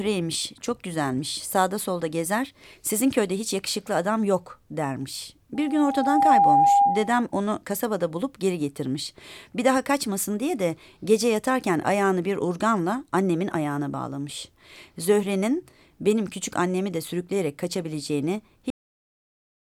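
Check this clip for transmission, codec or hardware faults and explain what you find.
Two problems stand out here, one in the middle and one at the very end.

From 5.55 to 7.26 s there's loudspeaker feedback squeal. A microphone is catching the speaker it drives, and at 804 Hz the loop gain tops one, so that frequency keeps feeding itself. You hear a steady tone creep in and swell over roughly three-quarters of a second until it sits around 10 dB above the speech, before it drops away.

At 18.70 s there's a cut-off end. The final stretch of buffers never got written or played out, so the speech stops dead mid-sound. There's no natural decay or tail. It snaps straight to digital silence, which runs from there to the end of the clip.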